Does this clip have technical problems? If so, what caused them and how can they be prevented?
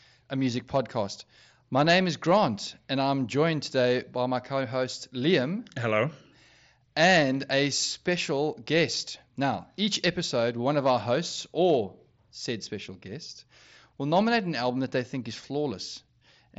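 No, the speech shows no technical faults, and it has the band-limited character of a Bluetooth mSBC headset link, with no content above about 7.7 kHz.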